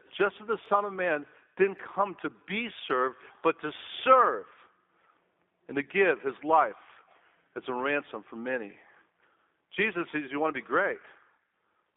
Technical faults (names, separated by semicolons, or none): G.729 codec